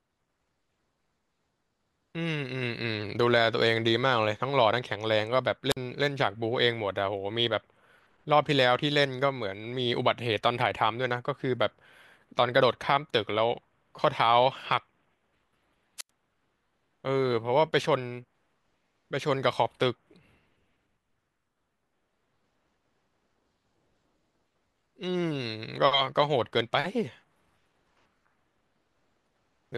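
A wireless microphone squelch dropout hits this speech recording twice. The FM radio link from the transmitter weakens until the receiver's squelch gates its output shut, so a short burst of rising hiss collapses into near silence before the voice returns. The first occurs from 5.70 to 5.77 s, with a mute of about 50 ms. The second, from 15.98 to 16.10 s, holds the silence for about 88 ms.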